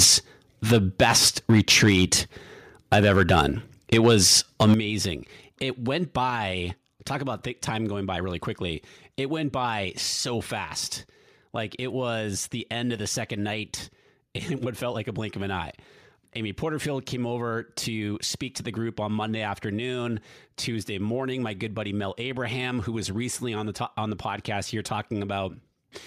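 From the first 0.16 s, the loudest syllables carry a harsh, crackling edge, which is likely microphone overload: peaks driven about 8 dB past the converter's limit have their tops flattened, affecting a few percent of samples. At 0.05 s the level drops suddenly by about 4 dB, which is likely the microphone volume being stepped down by the call software reacting to the clipping. The overload crackle returns from 0.71 to 2.14 s, 2.92 to 3.47 s and 3.92 to 4.74 s, with peaks about 4 to 5 dB over the limit. Right at 4.74 s the level falls by about 9 dB, with sound and background dropping together, and a further step of about 3 dB follows at 6.3 s.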